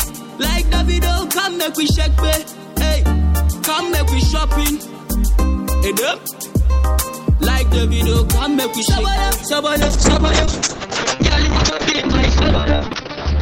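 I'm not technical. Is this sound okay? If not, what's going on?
No. From about 9.82 s right to the end, there's a call bitrate drop. The connection suddenly judged it had far less room, so the audio was squeezed into a tiny fraction of the data it had been using. The sound turns rough and watery, and the crisp top end disappears because everything above roughly 6 kHz gets cut off, leaving it muffled. It never recovers before the clip finishes.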